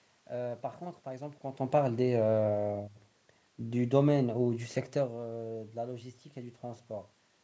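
No technical faults can be heard in this speech recording. The room's background noise is present, and the level shifts at roughly 1.5 s and again near 5 s come from the talker moving relative to the microphone.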